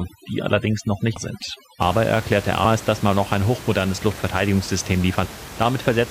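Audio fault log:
0.00–1.81 s, overdone noise removal. Noise reduction is pushed too hard here. Bands near the noise estimate are cut almost to nothing, taking soft parts of the speech with them. The room noise, about 15 dB below the speech, drops to near silence with twinkling specks.
1.12 s and 5.21 s, compressed frames skipped. At each point the audio jumps ahead. The first jump loses roughly 200 ms, which fits about four frames of 46.4 ms. The second loses roughly 400 ms, which fits about seven.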